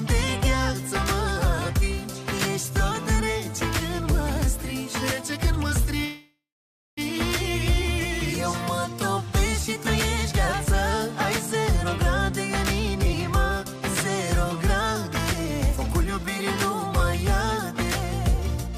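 At 6.05 s there's a call audio freeze: the last bit of sound smears into a fading buzz, sits silent about half a second, then resumes at 6.99 s. Likely late packets draining the jitter buffer, with nothing lost.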